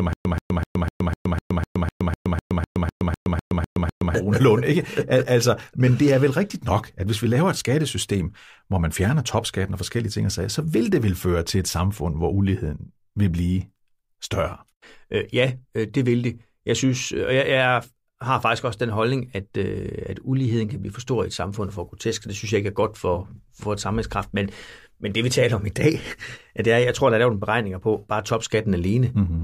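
From the very start to 4.14 s there's a stutter with silent gaps: a 131 ms burst of speech repeats 16 times with 120 ms of silence between, likely a stalled stream replaying its last fragment.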